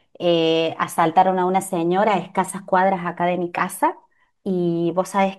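No technical faults can be heard anywhere in the speech. There is no point in the recording that calls for a timestamp or a comment on its processing.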